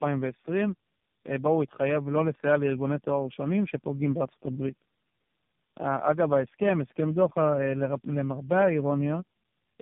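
Speech with tandem speech coding throughout: it sounds rough, muffled and warbly, which points to roughly three low-rate speech codecs in a row, each re-coding the last one's decoded output. A spectrogram shows nothing above 3.6 kHz, with smeared, blotchy harmonics.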